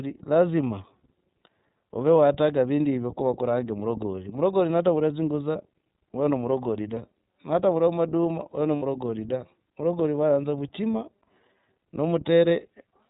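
Throughout, the speech passes through the iLBC codec. Nothing above 4 kHz survives, and the voice has a plainly audible rough, synthetic edge. The grain fits the 13.33 kbps mode with 30 ms frames. Unlike wideband codec smearing, the damage comes with a hard narrowband ceiling.

At 5.52 to 5.56 s, and again at 8.76 to 8.83 s between "oyo na" and "da varagori vayanza vuchima", there are lost iLBC frames. The first gap points to one missing 30 ms frame and the second to about 60 ms. Each is filled with a held, faintly buzzy vowel, not silence. The voice recovers almost immediately afterwards, because iLBC frames don't depend on earlier ones.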